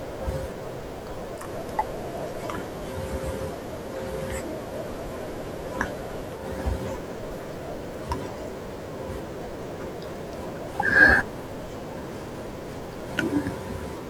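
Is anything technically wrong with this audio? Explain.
Yes. From 1.35 to 6.47 s, digital radio blends to analogue FM in 142 ms. Hiss rises, and the level shifts about 1 dB.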